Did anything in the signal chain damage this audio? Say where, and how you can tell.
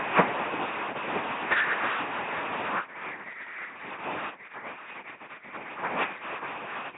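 Yes. The damage happens at the codec stage, across the whole clip. The speech has the buzzing, mechanical robot quality of an LPC-10 vocoder. Nothing is present above 3.8 kHz. The coder models the voice as a short all-pole filter excited by a pulse train or by noise. Each moment is forced to count as fully voiced or fully unvoiced. The codec damage is heavy, which fits a 2.4 kbit/s rate.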